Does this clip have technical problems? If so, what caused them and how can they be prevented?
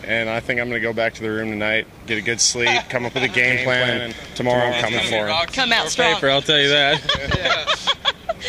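Yes. From 3.45 to 5.13 s there is a doubled audio track: a full-band copy about 150 ms late and around 5 dB quieter, starting and stopping abruptly. On a waveform or spectrogram, each event shows a weaker, identical shadow shifted right, with no decay tail. The likely cause is a second, slower capture path or an edit leaving two offset copies. To prevent it, route each source through a single path and check overlapping edits for duplicate regions.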